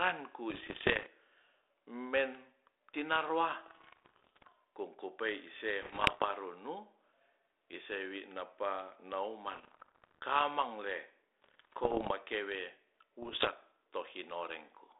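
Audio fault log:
0.50–1.07 s, 3.66–4.52 s, 5.82–6.25 s, 9.53–10.19 s, 11.42–12.11 s and 13.22–13.50 s: bit errors on an ADPCM link. The speech breaks into pops, rough bursts and brief jumps in level. The error rate is somewhere around one to two percent, heaviest in the 5.82 s stretch. Each flipped bit corrupts the decoder's step size and predictor as well as the sample, so the damage rings on for milliseconds. The narrow 300 Hz to 3.7 kHz band fits a 32 kbit/s G.726 link.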